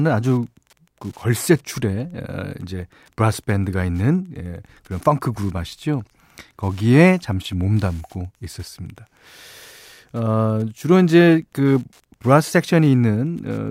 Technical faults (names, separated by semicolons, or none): Wi-Fi interference